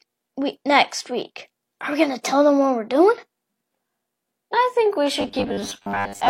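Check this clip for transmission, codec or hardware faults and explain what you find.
One fault is present. From 5.20 s to 6.29 s, the speech turns robotic from repeated short buffers. New audio likely arrived too seldom. A 10 ms chunk kept replaying, roughly half the time. That forces a fixed 100 Hz buzz. The voice becomes rigid and metallic.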